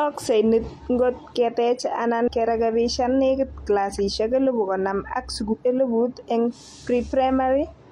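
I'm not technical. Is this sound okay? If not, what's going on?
No. Twice the speech hits a brief glitch from damaged data in a compressed stream: at 2.23 to 2.28 s, between "niit ngot keteech" and "kerekebishan nekit clasishek elebu", and at 5.48 to 5.55 s, just after "clasishek elebu konom ak". Part of the stored file was corrupted, so the player briefly scrambled and then jumped to the next readable piece. A plain dropout would just go silent, but here the trouble comes from the file itself being damaged.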